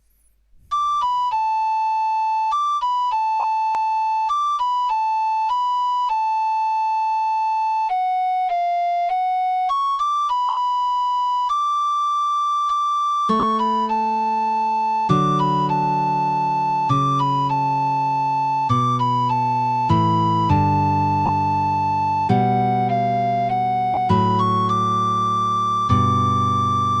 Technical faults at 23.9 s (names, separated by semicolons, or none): lost LE Audio frames